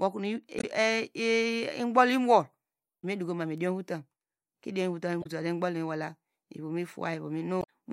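Four bursts of damaged data in a compressed stream break up the speech: 0.56–0.64 s, 2.98–3.05 s (just before "medukoma mu idiom votam"), 5.20–5.27 s and 7.60–7.65 s. Corrupted frames throw the decoder out of sync, giving brief chirps or squawks of 50–80 ms.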